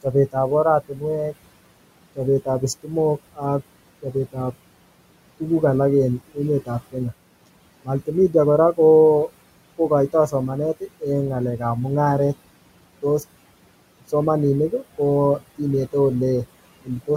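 Noise suppressor artifacts run through the whole recording. The suppressor pulls the room noise, sitting about 17 dB under the speech, down by about 21 dB between phrases, then lets it back under the speech, so the background pumps from frame to frame.

Speech cut by the noise suppressor occurs at 0.03–1.35 s, 2.16–4.53 s, 6.34–6.96 s, 7.84–11.03 s and 16.84–17.09 s. Each span loses a few hundred milliseconds or less of soft speech, attenuated by about 17 to 20 dB, so endings and quiet consonants sound swallowed.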